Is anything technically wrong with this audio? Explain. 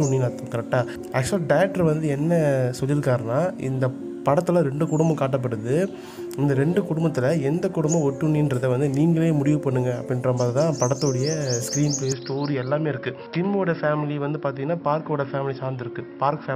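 Yes. From 12.12 s to the end, the input likely switched to a poorer device. The sound turns duller and a few dB quieter with no gap, and a faint new noise floor appears. A spectrogram shows everything above 5.5 kHz cut off, and the waveform envelope drops slightly.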